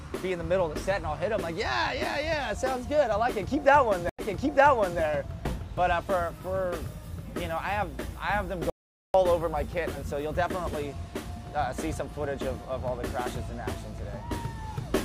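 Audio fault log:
4.09–5.01 s, stream reconnect: the connection broke and the player went quiet for 91 ms, then reconnected and began decoding again from a fresh decoder state partway through the stream. Rather than carrying on from where it stopped, the audio picks up 820 ms earlier than the point where it broke off, so a short stretch of sound plays a second time. This fits a server resending a burst of buffered data once the link was restored.
8.70–9.14 s, audio dropout to silence: the sound cuts out in mid-flow and is replaced by about 443 ms of complete silence, with no room tone or background underneath. It then resumes abruptly, and whatever sounded during that gap is lost rather than repeated or delayed. The likely cause is that the input was lost while the recording or encoding carried on writing silence, whether through a disconnected device, a failed link or a stray mute.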